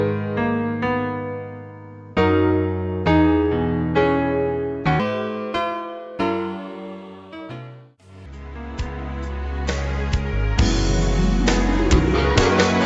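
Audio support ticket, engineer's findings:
Wrong sample rate, 5.00 to 8.26 s. Sound runs fast and high: speed 1.38x, pitch raised 5.55 semitones, both shifting together. Points to 16 kHz material clocked out at 22 kHz with no resampling. Probable component: playback rate setting or output stage on that segment. Normal speed and pitch before and after the segment.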